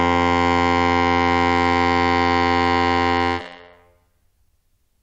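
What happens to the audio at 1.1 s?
Nothing goes wrong at 1.1 s; the music plays through that moment intact, with no dropout, click or other audible fault.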